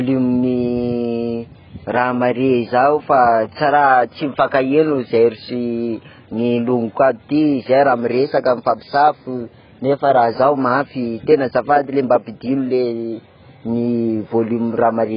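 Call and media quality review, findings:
Dull, band-limited speech throughout, nothing above 5.1 kHz. Heavy smearing, with a warbly, fizzy edge on sibilants and held vowels. Likely cause: AAC compression, AAC-LC at a very low rate, consistent with roughly 12 kbps. Encoder drops high bands and coarsely quantises the rest, leaving spectral holes and noisy fill.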